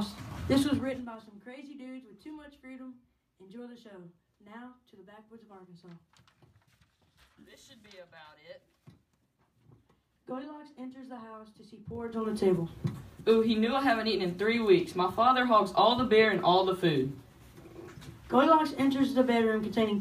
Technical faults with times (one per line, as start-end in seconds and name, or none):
0.60-1.18 zipper noise
11.84-12.33 zipper noise